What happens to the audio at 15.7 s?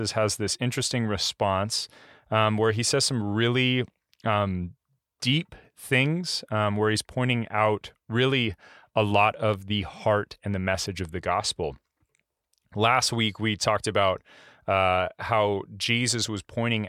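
At 15.7 s you're hearing the sample clock jitter that runs through the whole speech clip. The converter's timing wobbles by something under a microsecond, and the resulting error, about 40 dB down, adds a hiss that swells on loud, bright sounds and disappears in pauses.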